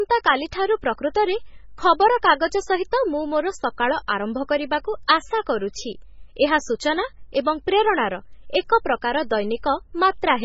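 Throughout the clip, the speech carries heavy MP3 compression damage, likely from an encoder starved of bits, which fits a rate near 16 kbps. Everything above 7.6 kHz is cut away, and weak frequency lines flicker between frames, leaving a watery, swirling sound with chirpy, metallic s sounds and smeared onsets.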